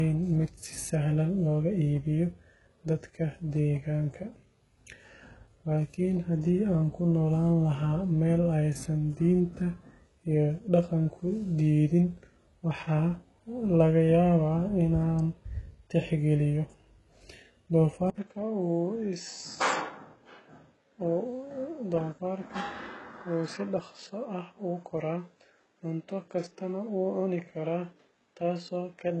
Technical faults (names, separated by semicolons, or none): HE-AAC compression; dropped samples; input switched to a poorer device